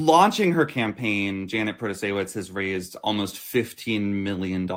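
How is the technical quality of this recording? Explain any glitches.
No glitches can be heard anywhere in the recording, and the signal stays continuous and technically intact throughout.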